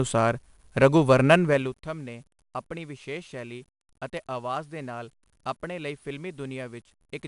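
Throughout the speech, 4-bit ADPCM compression leaves a gritty, level-following hiss and rough attacks; with nothing above 10.6 kHz, it fits a low-rate stream near 88 kbps. From 1.45 to 1.79 s, just before "ਨੇ ਆਪਣੀ ਵਿਸ਼ੇਸ਼ ਸ਼ੈਲੀ", zipper noise: the level drops by roughly 15 dB in unsmoothed 2 dB steps, about twenty per second, producing audible ticking.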